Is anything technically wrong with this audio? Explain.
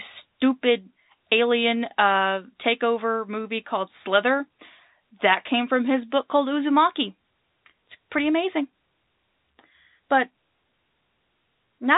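No, nothing is technically wrong with this audio.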